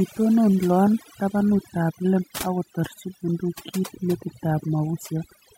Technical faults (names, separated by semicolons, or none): overdone noise removal